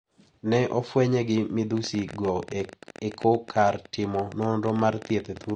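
From the first moment to the end, the speech carries plainly audible AAC compression damage, likely from AAC-LC at a low bitrate, with the degree of loss pointing to something around 32 kbps. The encoder drops the top of the band and starves weaker frequency regions, so the sound turns dull and smeared, with a watery warble on vowels and a fizzy edge on sibilants. A spectrogram would show a hard ceiling on high frequencies and patchy, blocky gaps beneath it.

From 1.77 s to 5.51 s a train of clicks runs over the speech, in gaps as well as during sound, at about 14.8 per second but with uneven spacing, around fifty in all. These are sharp, similar-shaped ticks, with the loudest standing a few decibels above the speech. The likely cause is interference or a faulty connection injecting pulses. On a waveform they appear as thin, isolated spikes. On a spectrogram they show as narrow vertical lines spanning the full frequency range.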